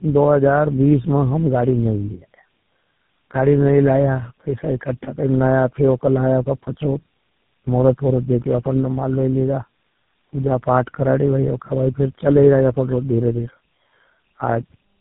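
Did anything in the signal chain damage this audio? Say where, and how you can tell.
Yes, at the codec stage, throughout the clip: tandem speech coding. The speech went through GSM full rate, AMR-NB at 7.95 kbit/s, then GSM full rate again. Each coder re-encoded the last one's errors, leaving it rough, muffled and warbly. A spectrogram shows nothing above 3.8 kHz and smeared harmonics.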